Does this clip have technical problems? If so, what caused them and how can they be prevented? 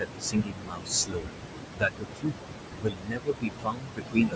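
Yes. Noise suppressor artifacts run through the whole clip. The room noise sits only about 5 dB below the speech. The suppressor pulls it down by about 21 dB, frame by frame. So the background pumps between phrases and rises under the voice. To prevent this, reduce the noise at the source or use a gentler suppression setting.

Speech cut by the noise suppressor occurs from 0.0 to 1.48 s, from 1.75 to 2.49 s, and from 2.8 s to the end. The suppressor mistook parts of the speech for noise and cut them by up to about 22 dB. This affects roughly a second and a half in the first and last spans and about half a second in the middle. Those parts of the speech sound swallowed or faint. To prevent this, improve the speech-to-noise ratio with a closer microphone so the suppressor can tell speech from noise.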